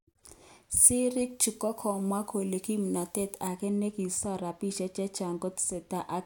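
From 0.77 s to 3.47 s this speech clip has pre-emphasis left on: the treble lift of an FM 50 µs curve was applied without the matching de-emphasis, so highs sit about 10 dB above 1 kHz at 10 kHz, making the voice thin, bright and sibilant.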